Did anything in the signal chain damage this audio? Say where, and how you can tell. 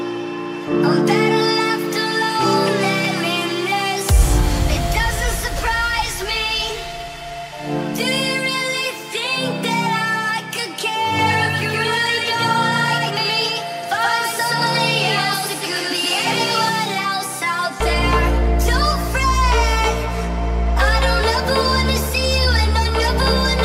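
Yes. From 11.19 s to 16.69 s there is a doubled audio track: a full-band copy trails about 150 ms behind at roughly equal level, likely a second capture through a slower driver path. Unlike echo, it has no decay or room colour and switches abruptly on and off.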